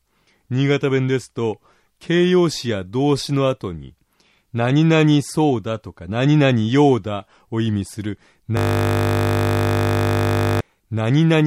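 From 8.57 s to 10.61 s the audio stops moving forward and turns into a steady, pitched buzz at 50 Hz for about two seconds. That buzz is a system hang loop: the computer or its audio driver froze, while the sound hardware kept replaying whatever was left in its ring buffer. The same 20 ms slice repeats exactly, around a hundred times in a row, and that fast repetition rate is what you hear as the 50 Hz tone.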